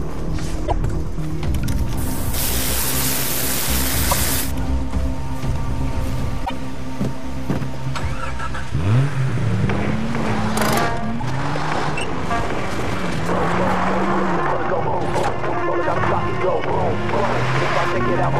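Short chirps and blips at 0.64–0.72 s, 4.10–4.13 s and 6.42–6.51 s come from damaged data in a compressed stream, where the decoder loses sync and skips to the next frame. From 10.96 to 16.00 s the pace turns suddenly rushed at about 1.55 times speed while pitch holds, likely a time-stretched section squeezed to fit a length. Within it, one more blip from damaged data sounds at 11.20–11.23 s.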